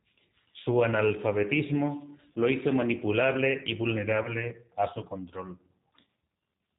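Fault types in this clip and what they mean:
G.729 codec: The audio was carried through a low-rate speech codec that rebuilds each 10 ms frame from a vocal tract filter, a pitch predictor and a few pulses, with a character that points to an 8 kbit/s G.729 stream. Nothing above 4 kHz survives, so the speech sounds band-limited throughout, and the coding damage is plainly audible as a rough, slightly synthetic texture over every syllable.
VoIP packet loss concealed by the speech codec: Packets went missing twice, and each time the decoder filled the gap by extending its last pitch and filter settings at falling gain. The first gap, from 4.23 to 4.30 s between "lo hizo manipulable y" and "a su control", and the second, from 6.05 to 6.07 s after "a su control", each sound like roughly 20 ms lost, which fits two missing frames. Both come out as a brief stretched sound in place of real speech.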